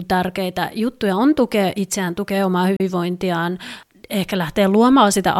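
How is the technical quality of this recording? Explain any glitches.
One brief glitch interrupts the speech. From 2.76 to 2.80 s there is a digital broadcast dropout: the receiver rejected a corrupted frame and muted, which fits one lost frame, about 32 ms of audio. The sound fades out in 3 ms into clean silence, then resumes further along. There is no click or repeated fragment, so it is a muted gap rather than a splice or a concealment artefact.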